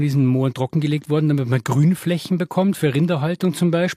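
No technical faults can be heard anywhere in this speech recording.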